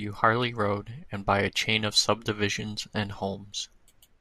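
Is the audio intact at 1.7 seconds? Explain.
Yes, at 1.7 seconds the speech runs through cleanly, with no dropout, click, distortion or other break in the sound.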